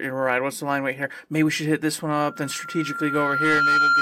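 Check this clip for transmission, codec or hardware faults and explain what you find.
One fault is present: a loudspeaker feedback squeal from 2.18 s, just after "should hit this one", to the end. The microphone re-amplifies its own loudspeaker, so a 1.4 kHz tone swells over roughly a second and a half to about 5 dB above the speech. Unlike steady interference, it grows.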